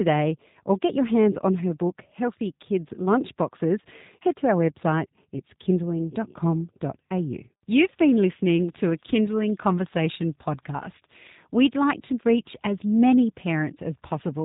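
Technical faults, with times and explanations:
Throughout, G.729 codec: the whole clip sits at 8 kbit/s, so the speech is rebuilt from a vocal tract filter, a pitch predictor and a few pulses per subframe rather than the real waveform. That leaves it noticeably rough and synthetic, and nothing gets through above 3.8 kHz.
8.6 to 10.0 s, train of clicks: about 20 sharp ticks, peaking roughly 5 dB above the speech, arrive at an uneven pace averaging 15.2 per second. They all have much the same shape, which likely points to interference or a struggling interface.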